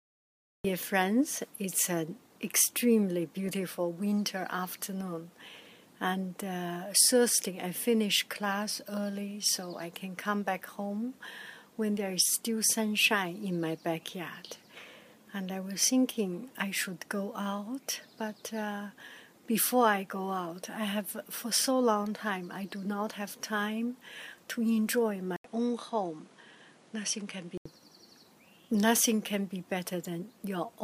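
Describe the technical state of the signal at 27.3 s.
At 27.3 s the signal sits inside a stretch from 25.36 to 27.66 s where the input was likely switched to a poorer device. The sound turns duller and a few dB quieter. A spectrogram shows nothing above 11.2 kHz, a new noise floor well below the signal, and an 80 ms gap in the waveform at the switch.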